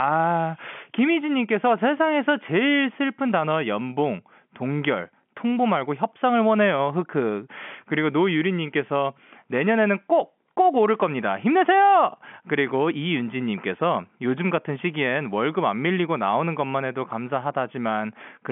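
No technical faults are audible.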